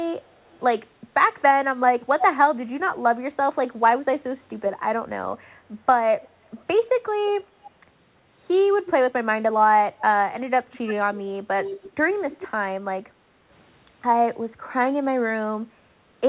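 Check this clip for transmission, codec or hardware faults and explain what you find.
There are two problems here, both from echo handling on the side playing the call on a loudspeaker, heard over a telephone-band call path that stops at 4 kHz, which fits G.711.

Echo leak at 0.23–0.6, 2.19–2.24, 6.22–6.29, 7.27–7.71, 8.88–8.92 and 10.72–12.48 s: a copy of the speech trailing by 320 ms, ranging from barely audible to fairly strong, likely loudspeaker pickup the echo canceller missed.

Background gated by the echo canceller at 13.06–13.49 s: the canceller clamped the mic, so room sound dips about 7 dB for under half a second, then returns.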